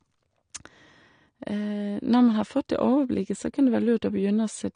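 Throughout the speech, the high end is missing above 9.7 kHz, and sibilants sound fizzy and smeared, likely from AAC compression at a low bitrate, around 32 kbps. The encoder lowered its cut-off, so a spectrogram shows a hard ceiling.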